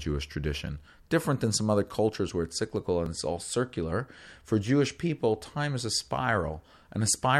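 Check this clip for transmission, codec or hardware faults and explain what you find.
One fault turns up in this speech clip, a repeated buffer at 3.06 s, between "cultures where it's cyclical" and "it's all circular". A block of about 5 ms arrived late, so the device played the previous one a second time. The hard joins make a brief buzzy click. Unlike a dropout, no sound goes missing; a tiny slice is simply duplicated.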